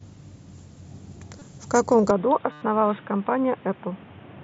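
At 1.39 to 1.42 s a brief buzzy smear replaces the sound for about 22 ms. This is concealed Bluetooth headset packet loss: the receiver covered the missing audio by repeating the closest-matching recent waveform.

From 2.1 s to the end the speech turns suddenly dull and boxy, with nothing above 3.8 kHz. There is no gap or level jump, and a faint new noise floor sits about 30 dB below the speech. The likely cause is the input switched to a poorer device.

From 2.52 to 2.62 s a further packet loss of about 98 ms is heard as a held buzzy tone. A small warble follows where real audio resumes.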